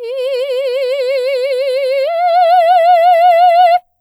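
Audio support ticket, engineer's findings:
Findings: no audible technical fault anywhere in this music clip.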